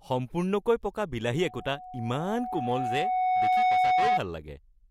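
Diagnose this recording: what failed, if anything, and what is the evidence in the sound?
A pure tone near 737 Hz rises out of the speech just after "সম্পূৰ্ণকৈ পকা" at 1.37 s, swells over roughly two seconds until it sits around 5 dB above the speech, and persists until it stops at 4.21 s. This is loudspeaker feedback squeal in the acoustic path between playback and capture. The microphone is hearing the loudspeaker it drives, and at 737 Hz the loop gain exceeds one, so that frequency reinforces itself on every pass until the loop is broken.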